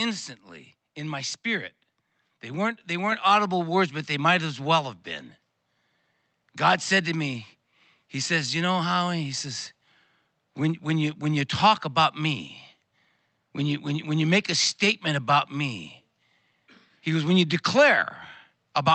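At 3.12 s, between "they weren't they" and "audible words but", the microphone volume steps up: the input level was raised in a single jump of about 5 dB, so the speech and the room background get louder together at that instant and stay there. That shared, instantaneous step is what separates it from a speaker leaning closer, which lifts only the voice and changes its tone. Throughout, the call codec limits the audio to about 8 kHz.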